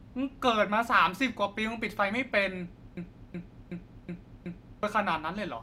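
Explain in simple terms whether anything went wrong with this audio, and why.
From 2.97 to 4.83 s there is a system hang loop: the same 0.37-second speech snippet repeats exactly five times, unlike dropouts, which skip or go silent.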